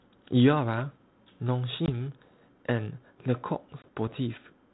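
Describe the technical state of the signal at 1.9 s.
At 1.9 s the speech is recovering from packet loss on an ADPCM call, spanning 1.86 to 1.89 s. About 20 ms, roughly one packet, drops out and is filled with silence, leaving a hard-edged hole. Because the decoder's adaptive predictor and step size stop tracking the sender's during the gap, the speech resumes slightly distorted. It settles within some tens of milliseconds, back into the 32 kbit/s G.726 band-limited telephone sound.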